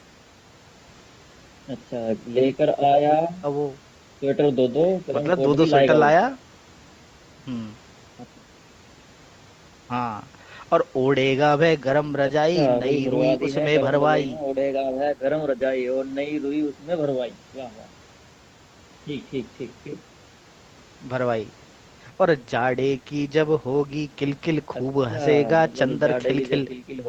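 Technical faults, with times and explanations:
No technical faults can be heard in this speech.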